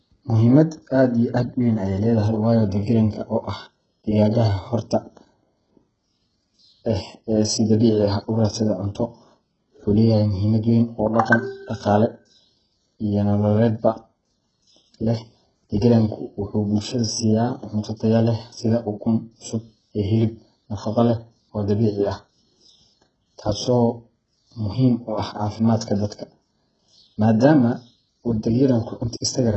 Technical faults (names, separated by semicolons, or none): HE-AAC compression